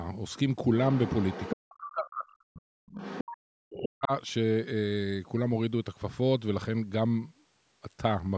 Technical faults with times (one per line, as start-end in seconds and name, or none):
0.86-1.55 other side's voice leaking through
1.55-2.82 speech suppressed in double talk
2.91-3.36 other side's voice leaking through
3.33-4.12 speech suppressed in double talk
3.78-3.89 other side's voice leaking through